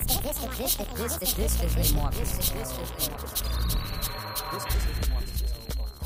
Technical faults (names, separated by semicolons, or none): time-stretched section